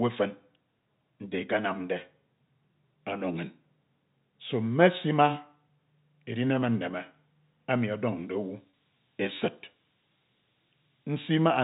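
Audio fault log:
7.98 to 11.64 s, switching supply whistle: A high whistle wanders between about 12.9 and 13.1 kHz, roughly 20 dB below the speech. A power supply running in audible burst mode, or beating with another one, fits this.
8.70 to 8.72 s, packet loss with pitch repetition: About 30 ms of audio dropped out, which fits a single lost packet. The receiver repeated the last pitch period, giving a brief buzzy hold.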